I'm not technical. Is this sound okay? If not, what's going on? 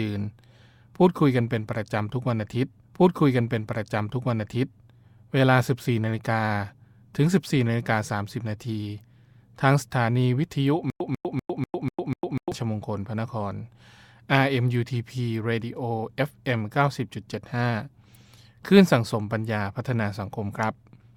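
No, there are two problems.

At 2.83 s there's a stream segment repeated. The player grabbed the same chunk of the stream twice, so from 2.83 to 4.83 s you hear two seconds of speech a second time, with a tiny blip where it jumps back. Nothing is missing. The clip just runs two seconds longer than it should, and anyone listening hears a stretch said twice.

From 10.9 to 12.52 s there's a stutter with silent gaps. A short burst of about 0.14 s plays, then about 0.1 s of dead silence, and that repeats 6 times at an even beat of roughly four per second. This is likely the stream stalling and the player replaying its last scrap each time it retried. Whatever speech should have filled that stretch is lost.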